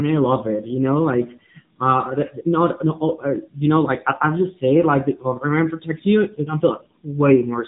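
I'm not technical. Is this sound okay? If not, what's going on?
No. The speech went through the AMR narrowband mobile codec, the squeezed format older phone networks use, at a low setting. Nothing above about 3.8 kHz survives, so throughout the clip the voice sounds muffled and phone-like, with a clearly buzzy, synthetic edge.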